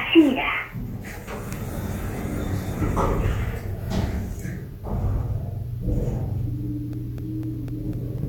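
Everyday sound here, and from 6.93 to 8.18 s you get periodic USB or driver dropouts: around seven ticks, one every 0.25 s, each a millisecond-ish gap of silence.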